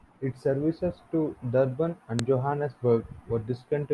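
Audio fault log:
2.19 s: file header played as audio, a sharp click where a new piece of the speech begins; leftover header bytes were decoded as samples instead of stripped.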